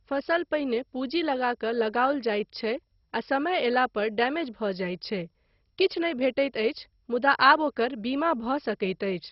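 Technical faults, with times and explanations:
Throughout: MP2 compression. The speech sounds dull and muffled, with nothing above about 5.6 kHz, plus a gurgly, grainy texture as bands flicker in and out. That's likely heavy MPEG Layer II coding, which fits a very low bitrate like 32 kbps.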